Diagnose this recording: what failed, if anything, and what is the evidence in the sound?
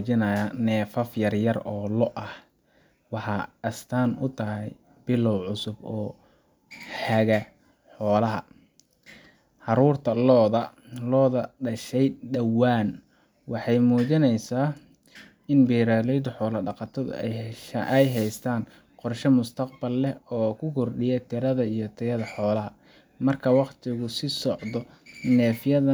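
Nothing failed in this recording, and the sound gives no evidence of a fault at any stage.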